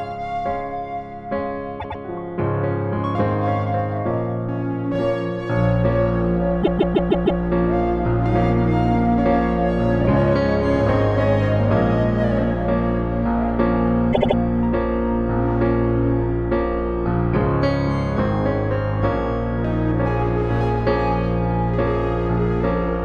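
Repeated frames cause a stutter at 1.79 to 2.00 s (a 104.5 ms block played twice more), 6.62 to 7.41 s (156.7 ms, five extra times) and 14.12 to 14.36 s (78.4 ms, three extra times). Duplicated compressed frames replay audio.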